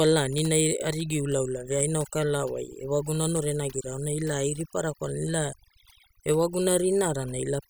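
Throughout the recording, the background sinks to near silence dotted with twinkling specks. This is overdone noise removal: an over-aggressive noise reducer drops individual frequency bands whenever they resemble its noise estimate, taking softer parts of the speech along with the noise.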